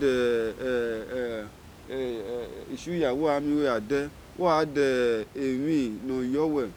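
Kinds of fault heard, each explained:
No system fault can be heard in the speech; the only background is the room's own ambient sound, which sits about 21 dB below the speech and belongs to the recording.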